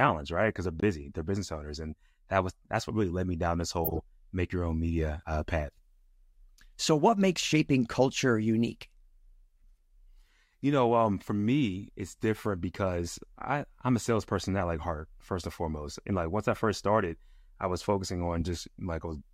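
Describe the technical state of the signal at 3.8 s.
At 3.84 s a corrupt frame decoded fault begins, running to 4.03 s. Damaged bits in a run of compressed speech frames, which fits about seven, were decoded anyway, misplacing energy across frequencies and producing a brief artifact peaking around -15 dBFS.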